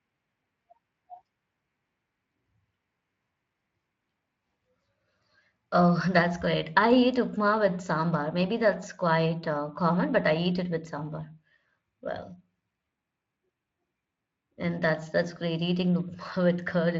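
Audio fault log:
Nothing in this speech stood out as a fault on listening.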